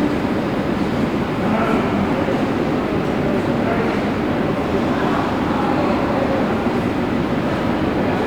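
No dropouts, clipping, glitches or other transport or processing faults are audible anywhere in the clip.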